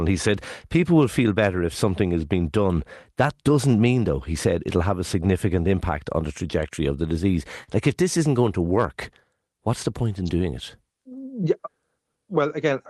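A short stall from a late packet falls at 7.63 to 7.71 s in this speech. A packet missed its playout time, the jitter buffer ran dry, and the receiver held the last sound for about 44 ms until the packet turned up, then resumed from the same point. Nothing is lost, but the sound is drawn out with a slight buzz or dip, and everything after it runs about 44 ms later. This happens over a call path whose top end stops near 12 kHz, pointing to a super-wideband Opus setting.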